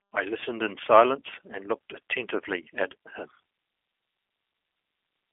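Speech run through the G.729 codec from start to finish, and you can plainly hear it. Everything above about 3.5 kHz is gone, and the band sits roughly at 250 Hz to 3.4 kHz, so it has that narrow telephone-line feel. The rough, slightly synthetic texture comes from the speech being rebuilt from a vocal tract filter and a handful of pulses per frame rather than sent as a waveform, which fits an 8 kbit/s G.729A stream.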